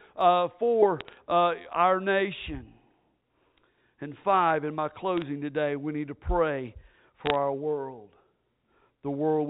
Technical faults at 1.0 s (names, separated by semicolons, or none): bit errors on a digital phone line